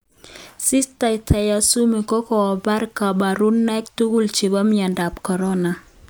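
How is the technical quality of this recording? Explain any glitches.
No glitches or dropouts heard.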